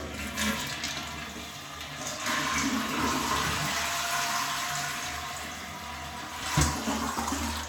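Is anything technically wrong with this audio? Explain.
No, nothing technically wrong can be heard anywhere in this audio.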